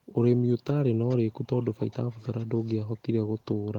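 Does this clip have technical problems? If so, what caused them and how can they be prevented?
Yes. Echo leak from 1.58 to 2.75 s: a faint delayed copy of the speech trails it by 440 ms, well below the main voice. It's likely a far-end loudspeaker whose echo canceller let its microphone pickup return. Using headsets or tuning that canceller prevents it.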